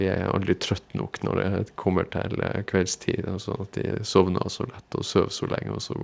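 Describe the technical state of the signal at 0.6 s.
At 0.6 s the speech is intact, with no fault present, only the expected coding of a wideband G.722 call path that leaves nothing above 8 kHz.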